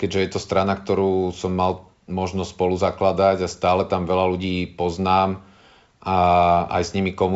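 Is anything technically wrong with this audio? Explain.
No, nothing in this speech clip points to a technical fault. It carries the marks of G.722 wideband telephone coding at a rate consistent with 64 kbit/s, with the sound stopping at about 7.7 kHz and the coding's own traces faint at most.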